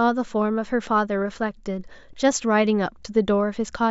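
No technical faults are audible anywhere in the speech recording.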